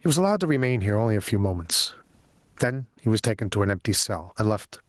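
Throughout the speech, the gain swings by around 20 dB, leaving loud and quiet passages squashed together. This gain pumping is likely from input gain set far too high, with a fast limiter clamping down on each peak.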